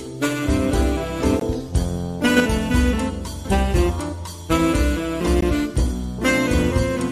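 At 1.40 s and again at 5.41 s the audio drops into a brief hole of about 18 ms, a gap between stream segments. The timestamps of adjacent segments fail to meet, and the player pads the space with silence, adding time rather than losing any sound. The spacing fits segment boundaries of about 2 s. Each gap is heard as a tiny click-like dropout. On a waveform it appears as a flat, hard-edged stretch of silence. A spectrogram shows a thin, full-height blank column.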